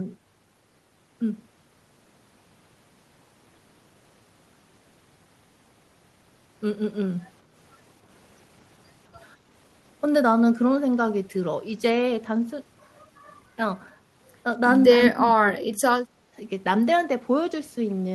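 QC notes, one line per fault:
14.98–15.84 s, speech suppressed in double talk: the talker's speech sinks by roughly 30 dB for around seven tenths of a second, then recovers. This is likely an echo canceller that heard both ends talking at once, could not separate the near talker from the loudspeaker echo, and attenuated everything. Unlike simple background gating, the speech itself is pulled down, and the dropout lasts through the overlap rather than being a brief dip in room tone.
16.18–16.35 s, background gated by the echo canceller: the room sound drops by about 12 dB for roughly 150 ms and then returns. The canceller clamped the microphone down hard while the loudspeaker was playing and then let go. The difference from double-talk suppression is that the dip hits the ambient background rather than fragmenting the talker, and it is short and shallow.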